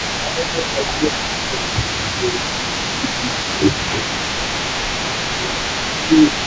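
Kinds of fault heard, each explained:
Echo leak: a faint, discrete copy of the speech trails about 264 ms behind throughout, roughly 10 dB down, likely uncancelled loudspeaker pickup, unlike smooth room reverberation.
Speech suppressed in double talk: the speech dips by up to about 10 dB in stretches from 0.24 to 6.45 s, likely echo-canceller ducking.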